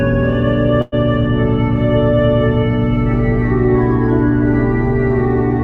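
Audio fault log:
throughout: mains hum. A steady low 60 Hz tone with low harmonics, about as loud as the sound itself. Power-line interference from a ground loop or nearby transformer.
0.81–0.94 s: call audio freeze. The last sound stretches into a fading buzz for about 110 ms, then resumes where it stopped. Nothing is lost, but everything after is delayed. Likely packets stalled and the jitter buffer ran dry.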